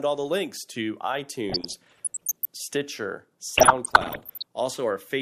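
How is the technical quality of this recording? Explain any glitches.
The speech is marred by two bursts of DAB burbling, from 1.50 to 2.45 s and again from 3.47 to 4.43 s. Weak reception let bit errors slip past error correction into the MP2 data, corrupting samples and scale factors so individual sub-bands leap in level for a frame at a time. The sound is a bubbling, squelchy chirping over the speech. A spectrogram shows scattered rectangular patches of energy in isolated bands; the waveform shows brief, jagged level jumps.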